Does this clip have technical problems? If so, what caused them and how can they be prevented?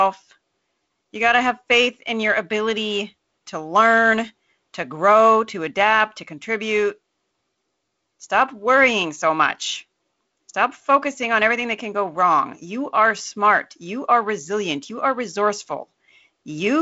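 No, there's nothing here that needs fixing; it's speech carried over G.722 wideband telephone coding at 48 kbit/s, so the top end stops at about 7.7 kHz, as you'd expect from that link.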